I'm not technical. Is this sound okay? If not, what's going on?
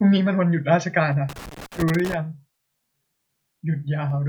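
No, not quite. From about 1.29 to 2.14 seconds there's a burst of loose connector crackle, a rough scratchy sputter that lasts a bit under a second. It happens when a plug or cable contact is worn or dirty and wiggles. The connection keeps cutting in and out very fast, chopping up the speech. Reseating or cleaning that cable usually sorts it.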